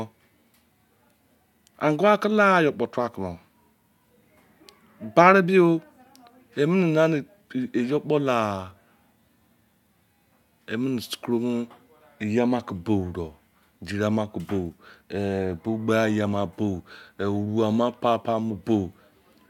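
Listening to this speech recording, nothing stood out as a technical problem at any point.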